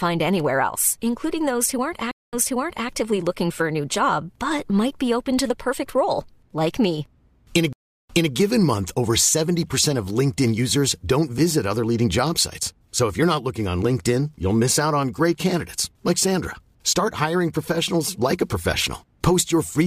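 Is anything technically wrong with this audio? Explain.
Yes. Two stream reconnects break this speech. At 2.11 to 2.89 s, after "including those who aren't", the audio drops out for 214 ms, then a fresh decoder resumes about 560 ms earlier, repeating material before "actively looking for a". At 7.73 to 8.33 s, a 365 ms silence precedes a restart 240 ms back, ahead of "given month over". Each time the connection fails and the player restarts mid-stream on a resent burst, so there is a gap, a softened onset and audibly repeated speech.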